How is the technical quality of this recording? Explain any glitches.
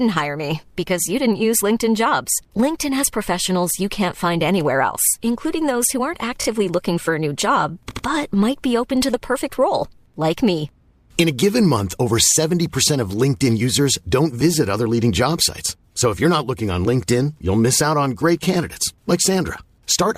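The speech has two stutters from repeated frames. At 6.41 to 6.45 s, right after "including those who aren't", a 20 ms slice plays three times, adding 40 ms. At 7.89 to 8.05 s, after "for a new job", an 80 ms block does the same, adding 160 ms, which fits four 20 ms frames. The decoder is fed the same compressed frames again, so the sound jumps back.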